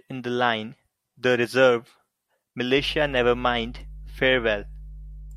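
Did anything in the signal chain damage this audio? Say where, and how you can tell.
Yes. Mains hum enters at 2.78 s and runs to the end at 5.36 s: a steady 50 Hz tone sitting roughly 15 dB below the speech. This points to the analogue wiring, where a ground loop or nearby transformer couples the power line into the signal.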